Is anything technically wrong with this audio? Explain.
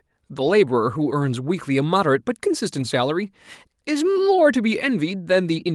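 Yes. At 0.47 s and 2.79 s a single lost packet was rebuilt from error correction: the next packet carried a low-bitrate copy that the decoder played, leaving no gap but about 20 ms of rougher, noisier speech. The call codec limits the band to about 12 kHz.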